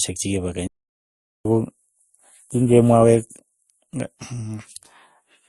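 From the start and through the whole speech clip, nothing is present above 12 kHz, and two different kinds of coding smear sit on top of each other, which points to transcoding between lossy codecs. The pattern fits an MP3 stage followed by Opus, both around 48 kbit/s. A single codec leaves one consistent texture. Here the second encoder has spent its bits re-coding the first one's artefacts and added its own, so both are heard together over the 12 kHz ceiling.

From 0.67 s to 1.45 s the output falls completely silent for about 0.78 s, mid-flow, and then continues from where it stopped. This is a playback stall, most likely the player running short of data or its thread being blocked. A brief packet dropout would lose a fragment of audio. This gap is long and clean, and nothing is missing once the sound resumes.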